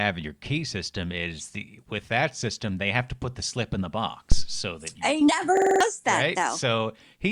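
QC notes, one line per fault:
4.32–4.58 s, phantom power thump: a supply switched on a live input sends a DC step through the coupling capacitors, giving a deep low thump that dies away over about 60 ms. Waveform shows one large lopsided swing; the spectrogram shows a dark burst at the bottom.
5.57–5.81 s, system hang loop: the system froze while the hardware kept replaying one 46.44 ms segment, which fits a 2048-sample buffer, five times, giving a 21.5 Hz stutter and losing about a fifth of a second of speech. Waveform shows identical repeated blocks; spectrogram, evenly spaced vertical seams.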